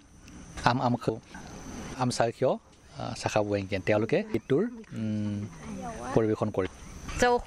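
At 1.09 s a brief blip breaks through the sound. The same thing happens again at 4.34 s and at 6.67 s. Each is damaged data in a compressed stream. A stretch of the encoded file was lost, zeroed or overwritten. The decoder misread the frames there and lost its place. It then hunted for the next valid frame header. Each of these moments is heard as a short chirp, squawk, click or brief hole that cuts across the audio.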